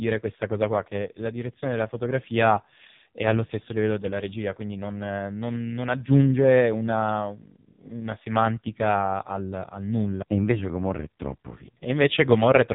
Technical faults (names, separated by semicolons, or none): AMR narrowband mobile codec